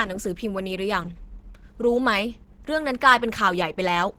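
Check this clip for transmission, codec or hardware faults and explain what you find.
One codec fault runs through the whole clip. From start to finish the speech sounds hoarse and muffled, with a rough, grainy texture. The top of the spectrum is still present, but it sounds noisy rather than clean. The likely cause is Opus compression in its hybrid mode, consistent with a bitrate near 16 kbps. The lower band is coded as speech, and the fullband upper range gets too few bits, so its detail is filled with noise.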